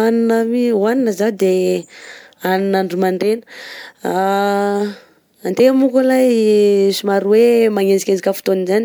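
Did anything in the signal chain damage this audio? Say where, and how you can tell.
No, nothing in the signal chain audibly damages this speech recording, and the signal holds steady, continuous and intact throughout.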